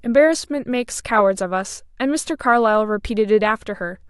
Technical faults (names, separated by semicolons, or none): none